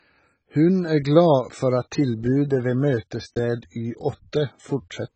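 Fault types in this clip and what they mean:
AAC compression: The speech was likely passed through an AAC-LC encoder starved of bits. The damage is heavy enough to point to a very low bitrate, around 16 kbps, where the encoder quantises its frequency lines coarsely and discards whatever the hearing model deems expendable. Throughout the clip nothing remains above 8.3 kHz, so the speech sounds dull and lacks air. The coarse coding also leaves it smeared and grainy rather than clean.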